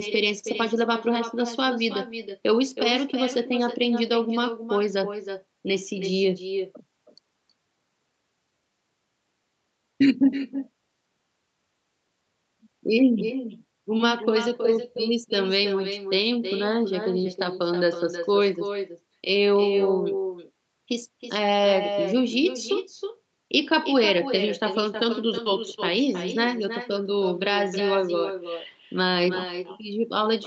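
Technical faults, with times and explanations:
Throughout, echo with no canceller: the far end's loudspeaker feeds the call back into its microphone, and nothing subtracts it, so every phrase returns roughly a third of a second later at about 8 dB below the direct speech, sounding thinner. On a spectrogram each syllable's harmonic bands reappear as a fainter copy shifted right, all capped at 8 kHz like the direct signal; the waveform shows smaller trailing bursts filling pauses.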